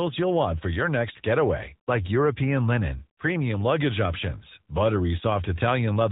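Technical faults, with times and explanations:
Throughout, AMR narrowband mobile codec. Nothing above 4 kHz survives, so the speech sounds boxed in and phone-like. The voice is rebuilt from a vocal-tract model and sparse pulses. That leaves a plainly audible buzzy, synthetic edge, which fits an upper-rate mode near 10.2 kbps.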